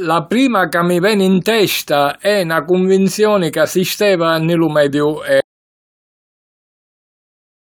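An audio dropout to silence starts at 5.40 s and runs to the end: the speech cuts off into silence with no room tone, likely because the input was lost.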